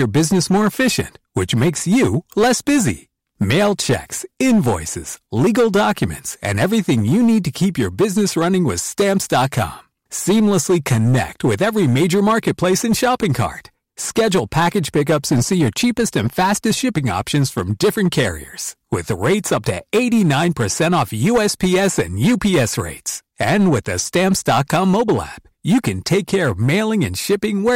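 A harsh, gritty fuzz rides on every louder syllable from start to finish, with crackle on the strongest peaks while quieter passages stay cleaner. This is hard clipping: the speech was driven about 10 dB beyond what a stage in the chain could pass, so its peaks were sliced flat, affecting roughly one sample in fourteen. Those squared-off tops generate harmonics high in the spectrum, which is where the fuzz comes from.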